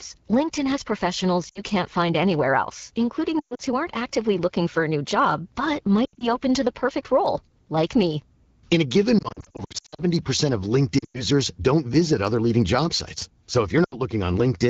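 Throughout the clip, a block size mismatch (truncated) means one stage writes longer blocks than the next reads, so each block's tail is dropped. This gives a steady buzz at 43.1 Hz, which fits 1024-sample blocks, while the pace of the speech stays at its normal speed.

Lost AMR speech frames occur at 1.49 to 1.61 s, 3.39 to 3.62 s, 6.05 to 6.37 s, 9.19 to 10.03 s, 10.99 to 11.23 s and 13.84 to 13.95 s. Frames that failed their checks were concealed by repeating the last good settings at falling gain, which is heard as dips, warbles and brief fades under the clear HD Voice band. The 9.19 s stretch is the longest, with short gaps of up to 60 ms spread across 0.8 s. The worst single run is 120 ms near 3.4 s.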